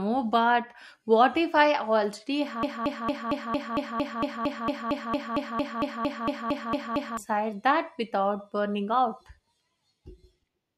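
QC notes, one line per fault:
2.63–7.17 s broken-record loop: after "what if I already", an identical 228 ms fragment repeats 20 times, likely a stalled stream; the speech is lost, not delayed.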